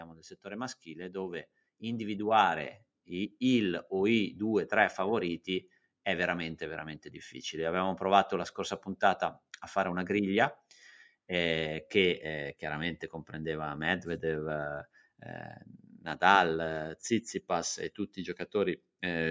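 It's a speech recording with automatic gain rising from 0.42 to 4.27 s: the gain control judged the input too quiet and slowly pushed it up by about 8 dB, so the voice and room noise swell together rather than the speaker getting louder. The call microphone processing, which tops out at 8 kHz, isn't a fault.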